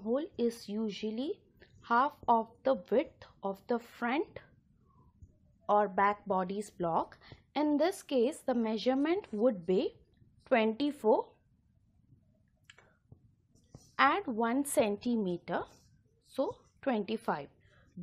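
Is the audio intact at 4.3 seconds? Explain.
Yes, at 4.3 seconds the audio plays through intact, with no dropout, click, distortion or other fault.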